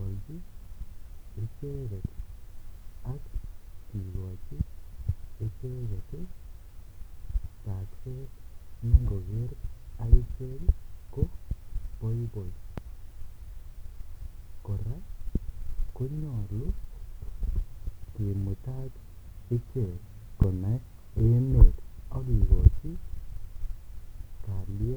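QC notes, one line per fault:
No faults found in the speech recording. Nothing in it calls for a timed entry.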